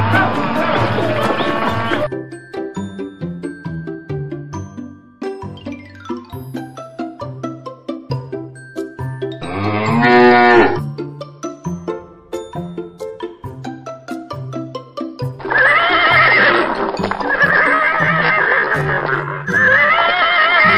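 From 17.66 s to the end, a time-stretched section slows the audio to about 0.59 times its normal pace while pitch stays unchanged. The likely cause is software lengthening that span by repeating short pieces, which makes it drag.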